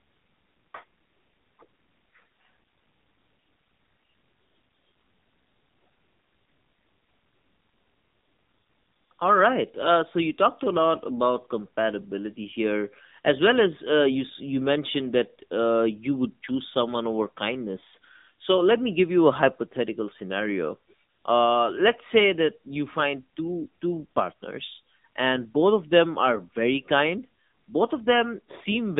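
From start to end, AMR narrowband mobile codec damage makes the speech buzzy and synthetic, fitting a 7.4 kbps mode. A spectrogram shows nothing outside 150 Hz to 3.7 kHz.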